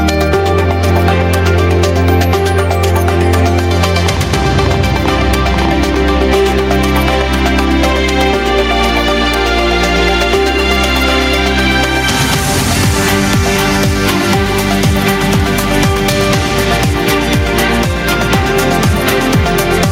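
The audio breathes throughout, with the gain swinging by around 10 dB and leaving loud and soft parts squashed close together. This is gain pumping, with input gain likely set far too high and a fast limiter or compressor clamping down on every peak. From 4.06 to 5.95 s a train of clicks ticks over the sound at an uneven pace of about 9.6 per second, roughly twenty similar pops standing a few dB above the signal, likely from interference or a faulty connection injecting pulses.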